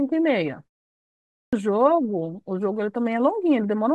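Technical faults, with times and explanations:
1.32–1.53 s, clipped start after a pause: after a 0.71 s silence the playback path had gone idle, so the first 0.21 s of the returning speech is lost while it wakes and relocks, and the sound resumes abruptly without its onset.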